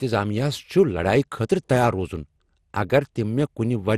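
Generation loss runs throughout the speech: it has a swirly, smeared, hollow quality, with blurred attacks and nothing above 15 kHz. This is likely from repeated lossy re-encoding, around ten passes through MP2 at what sounds like 96 kbit/s, each shifting the frame grid and compounding the damage.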